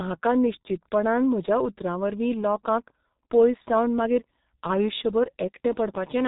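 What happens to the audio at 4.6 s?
At 4.6 s, as across the whole clip, the G.723.1 codec's coarse 30 ms frames and roughly 6 kbit/s budget leave nothing above 3.8 kHz, so the speech sounds muffled and hoarse, with smeared consonants.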